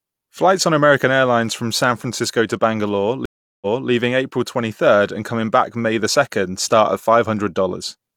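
A stream reconnect interrupts this speech clip from 3.25 to 3.89 s. The connection dropped, leaving about 0.36 s of silence, then a fresh decoder picked up mid-stream from resent data, so the speech resumes 0.28 s earlier and briefly repeats itself.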